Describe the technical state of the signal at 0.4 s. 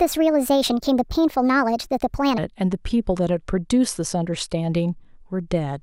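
Wrong sample rate, 0 to 2.38 s: speech runs 1.38 times fast and 5.6 semitones high together, fitting 32 kHz sound played at 44.1 kHz.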